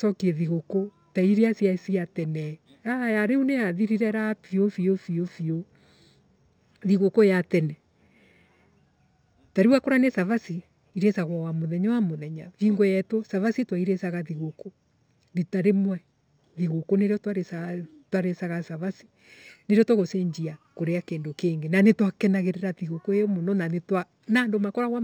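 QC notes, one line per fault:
throughout, imaging from linear upsampling: rate raised from 12 kHz to 44.1 kHz by straight-line interpolation, so the band's top below 6 kHz is dulled and a mirrored copy spanning 6 to 12 kHz survives, about 35 dB down, giving sibilants a faint metallic shimmer.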